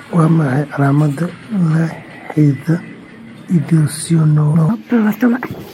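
It's a short speech clip, and near the end, at 4.53 s, there's a case of compressed frames skipped. The audio lurches forward by around 0.7 s with a brief smeared blip rather than a click, which points to roughly twenty 26.1 ms frames being lost or rejected by the decoder. Then from 4.69 s to the end there's a section at the wrong speed. It runs at 1.42 times normal, so the speech turns hurried and chipmunky, about seven semitones up, most likely from being played against the wrong clock.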